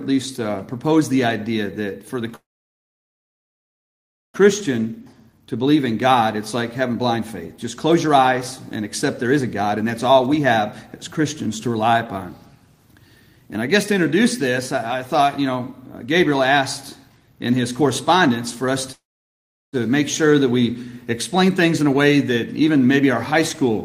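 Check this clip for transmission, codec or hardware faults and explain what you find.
Two kinds of fault are present: two call audio freezes and three stretches of jitter buffer speed-up.

Call audio freezes occur at 2.35–4.37 s and 18.92–19.76 s. Each time, the last sound trails off briefly into about 1.9 s and 0.73 s of silence, with the likely cause being delayed packets draining the jitter buffer. Unlike a dropout, the audio resumes exactly where it stopped, so a gap is inserted and nothing is lost.

Jitter buffer speed-up occurs at 4.68–11.90 s (109% speed, roughly 0.7 s removed), 13.48–18.71 s (110%, about half a second removed) and 21.35–23.70 s (106%, roughly 0.15 s removed). The receiver trims short pitch-period slices to cut the excess buffered delay, so the audio sounds hurried. Unlike a resampling error, the pitch stays unchanged.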